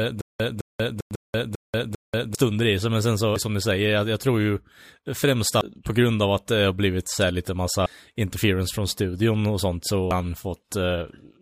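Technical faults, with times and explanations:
0.00–2.35 s, stutter with silent gaps: the clip opens already stuck, a 0.21 s fragment of speech repeating six times, each followed by about 0.19 s of dead digital silence, so the same burst returns every 0.40 s until normal playback resumes before "i sig men sen". This is likely a stalled stream replaying its last fragment at each retry, then running empty. Unlike a dropout, the identical sound keeps coming back, and unlike a seamless loop, true silence separates the repeats.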